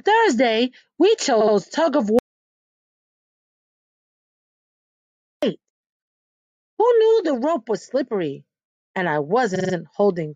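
At 2.19 s the sound cuts off mid-flow into an audio dropout to silence lasting until 5.43 s, about 3.24 s of silence with no room tone. The input was likely lost through a disconnected device or failed link, and the gap's content is unrecoverable.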